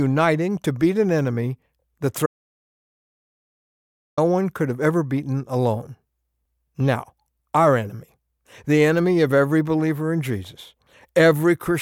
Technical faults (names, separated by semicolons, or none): audio dropout to silence